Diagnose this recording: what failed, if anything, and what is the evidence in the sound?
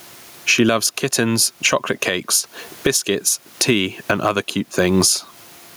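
Gain pumping throughout: input gain likely too high, so a fast limiter ducks each loud syllable, with the gain swinging around 20 dB.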